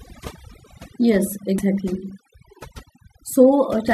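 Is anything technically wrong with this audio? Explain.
Yes, there are two faults. Throughout, overdone noise removal was applied: the noise reduction was set too aggressively and shuts off individual frequency bands whenever they sit near its noise estimate, taking the quieter parts of the voice with them. The background drops and breaks up into twinkling specks.

From 1.58 to 1.62 s there is damaged data in a compressed stream: corrupted bytes there left the decoder unable to read those frames, so it lost sync and hunted for the next valid frame header. This is heard as a brief chirp or blip.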